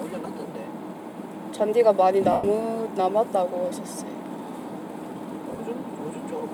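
The clip is everyday sound with lost LE Audio frames at 2.32–2.44 s and 5.52–5.60 s. Unlike a plain dropout's abrupt silence, the LC3 decoder refills each gap from the last spectrum with scrambled phase, so tones smear into noise. The first gap, 112.5 ms, fades as concealment decays. The second is short scattered runs, fitting 7.5 ms frames.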